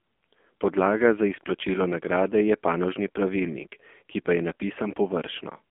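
The whole way through, the speech has been squeezed through an AMR narrowband mobile codec. The band sits roughly between 250 Hz and 3.4 kHz, with nothing at all above 3.5 kHz, so it has that flat phone-call sound. The codec rebuilds the voice from a vocal-tract model fed by sparse pulses, and the damage here is heavy. It's buzzy and synthetic, which fits one of the low AMR-NB modes, around 6.7 kbps.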